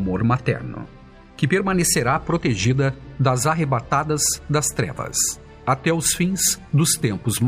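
Nothing is technically wrong with this audio.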